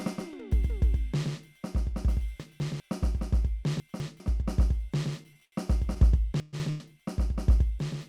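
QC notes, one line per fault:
Throughout: doubled audio track, a full-band copy of the music sits roughly 100 ms behind and about 5 dB down, likely from a second, slower capture path.
2.4–2.8 s, 3.8–4.2 s and 6.4–6.8 s: chunks out of order, each time a 200 ms chunk plays one chunk late, swapping places with its neighbour, giving a jumbled moment with hard joins.
5.33–5.37 s and 5.45–5.54 s: short stall from a late packet, the last sound is held for 28 ms and then 72 ms while the jitter buffer sits empty, then resumes with nothing lost.
6.70 s: call audio freeze, the music stops moving and a fading continuation of the last sound fills about 231 ms, likely from packets held up in transit, before playback continues from the same point.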